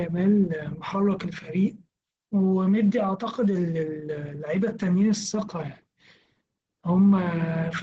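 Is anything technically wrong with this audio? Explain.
Yes. Opus voice compression at a low bitrate runs through the whole speech clip. The sound points to the SILK linear-prediction mode at around 12 kbps in wideband, so nothing above 8 kHz survives and the excitation is coded coarsely. The result is muffled, hoarse and slightly robotic. On a spectrogram there is a flat ceiling at 8 kHz, with blurred, grainy harmonics below it. The waveform shows little, because the damage is spectral.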